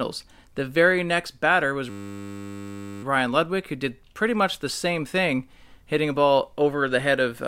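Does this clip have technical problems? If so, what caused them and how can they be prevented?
Yes. A system hang loop: after "very next batter was", the driver stalled from 1.9 to 3.03 s, replaying one 10 ms buffer as a steady 100 Hz buzz. To prevent it, fix the stall and make the driver output silence, not the old buffer, when new audio stops arriving.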